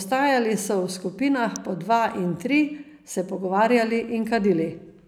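At 1.56 s, just before "po dva in tri", a sharp snap cuts across the speech. It is an electrical switching spike. It lasts only a moment and peaks at around -15 dBFS. The likely cause is a nearby switch, motor or static discharge arcing. The audio line picks up that burst of interference. It sits on top of the speech as a hard, dry tick.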